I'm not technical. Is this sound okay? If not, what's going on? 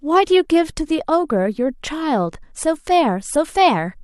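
Yes, this sound is okay. There's nothing here that needs fixing.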